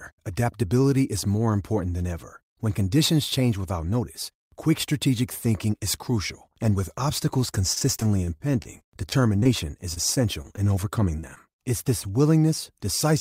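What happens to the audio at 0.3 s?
Nothing goes wrong at 0.3 s; the speech there plays through intact, with no dropout, click or distortion.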